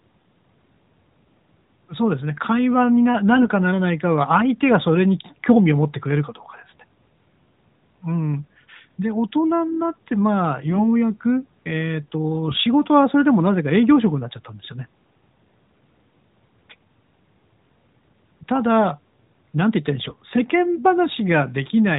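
Speech carried over an AMR narrowband mobile codec, band-limited below 4 kHz, with light coding damage that fits the 12.2 kbps mode. Four short bursts of AMR bit errors break in, at 3.36 to 3.49 s, 10.69 to 10.87 s, 12.48 to 12.61 s, and 20.04 to 20.16 s. Each hits five to seven 20 ms frames. Pitch and level roughly hold, but the voice turns hoarse, scratchy and gargly. Flipped low-priority bits misplace the excitation pulses and skew the fine pitch, gain and spectral values.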